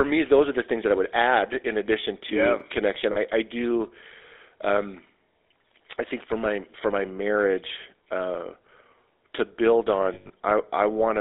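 The whole clip of speech carries GSM full-rate codec damage, plainly audible: a buzzy, gravelly roughness from pulse-driven vocal-tract modelling, with the band held to about 300 Hz to 3.7 kHz. Unlike plain band-limiting, the texture itself is coarse, which fits the 13 kbps full-rate coder.

At 2.58 s to 2.61 s, chunks out of order produce a brief jumbled stutter. A chunk of about 11.6 ms plays two chunks late, so nothing goes missing. The sound is merely reordered across hard joins, which is what separates it from a dropout.

From 3.12 s to 3.17 s, lost GSM frames replace 40 ms of sound with a short, rough metallic ring. The last good frame is repeated, so a held tone fills the gap instead of silence or a click.

From 10.14 s to 10.31 s, further lost GSM frames add up to 140 ms, scattered over 160 ms, with the longest run about a tenth of a second. The metallic hold returns repeatedly across the gap, unlike the hard joins of reordered chunks.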